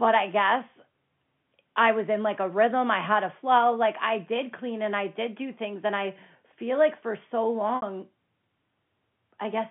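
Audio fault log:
7.76–7.82 s, packet loss with pitch repetition: 60 ms of the telephone-band sound is lost, which fits three 20 ms packets. The last pitch period is repeated and faded over about 50 ms, giving a brief held buzz instead of a plain dropout's silent gap.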